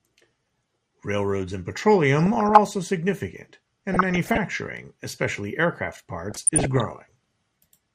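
Throughout the speech there is a dull, granular gurgle, with the upper range thinning and flickering as if bands were switching in and out. This is MP2 compression, most likely at a starved rate around 80 kbps, where Layer II's sub-bands get too few bits and the top ones drop out.

Bursts of DAB burbling over the voice come at 2.19 to 2.58 s, 3.92 to 4.38 s, and 6.30 to 6.85 s just after "especially aircraft". Bit errors at a fraction of a percent slipped past error correction, putting short blips of noise into individual sub-bands.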